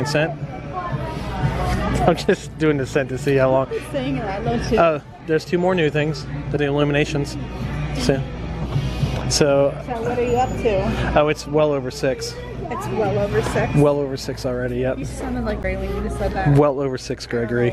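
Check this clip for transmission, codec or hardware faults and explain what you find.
The compressed stream carrying this clip has damaged data in five places: at 3.76 s, from 6.55 to 6.57 s, and at 8.64, 15.63 and 17.72 s, the last right at the very end. At each point, corrupted bytes in the stream cause the decoder to misread frames, lose sync and hunt for the next valid frame header. Each hit is brief, 20 ms or less, and is heard as a short chirp or blip cutting across the sound.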